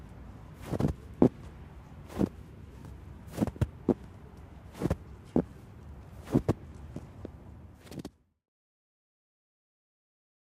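No technical faults can be heard in this audio. Toward the end, the level fades out smoothly from around 7 s to 8.5 s, with no click or hard edge.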